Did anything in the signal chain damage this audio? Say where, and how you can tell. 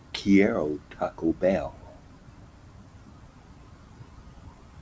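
Yes. A noise suppressor built for speech was left on through the call processing stage and runs for the whole clip. Sustained parts and decay tails are pushed down by around 10 dB while onsets pass, so the level pumps and thins. Steady compression would hold tails evenly, but this gain drops only once the sound settles. The empty band above 8 kHz is simply the wideband call path, which fits G.722.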